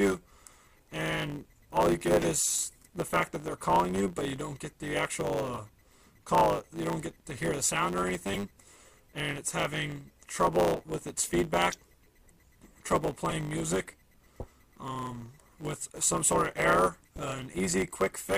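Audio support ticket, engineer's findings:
Block size mismatch (truncated), whole clip. 100 Hz buzz under all audio; playback about 1.09x fast with pitch essentially unchanged. Probable cause: a buffer handoff where the upstream stage writes longer blocks than the downstream stage reads, so each block's tail is dropped. Spectrogram shows a steady 100 Hz line with harmonics stacked above it. Waveform shows small discontinuities every 10 ms at the splice points.

Corrupt frame decoded, 8 events: 2.22–2.25 s, 5.55–5.59 s, 8.34–8.38 s, 10.75–10.77 s, 11.70–11.77 s, 13.30–13.33 s, 14.38–14.48 s, 17.12–17.22 s. Short chirps and noise bursts, from one up to a few frames each. Probable cause: bit errors in the compressed stream that the decoder played through, so misread gains and codes put energy in the wrong bands. Spectrogram shows brief misplaced patches or streaks. Waveform shows sudden jumps in amplitude.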